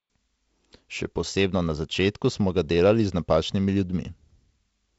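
Nothing in this speech recording stands out as faulty.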